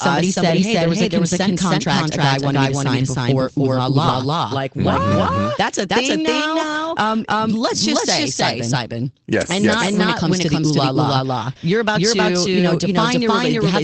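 Throughout this speech clip a second, equally loud copy of the whole signal trails the original by roughly a third of a second, giving a hard, slapback-like doubling with no reverberant tail or room colouring. That is a doubled audio track, most likely from the same feed being captured twice through paths of different speed, so the two copies sum out of step across the full band. Separately, there are three brief spots where the sound turns grainy and noisy rather than dropping out: from 4.07 to 4.13 s, just after "sign before ooh la", lasting about 40 ms, which fits two lost packets, then again at 5.11 s and 8.93 s, about 20 ms each. These are lost packets rebuilt from error correction. The Opus stream, running at 24 kbps with an 8 kHz audio bandwidth, carried a coarse low-bitrate duplicate of each missing frame inside the next packet. The decoder played that rougher copy to fill the hole, which trades a gap for a moment of degraded texture.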